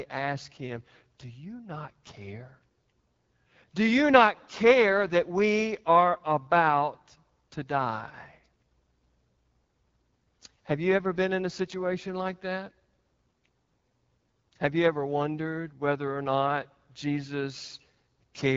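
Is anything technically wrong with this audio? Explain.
Yes. The whole speech clip carries AMR wideband (HD Voice) codec damage, and it is plainly audible. The codec models speech with a pulse-excited vocal tract up to 6.4 kHz and fills the top with shaped noise. Nothing sounds above 7.5 kHz. The roughness fits a low mode near 8.85 kbit/s.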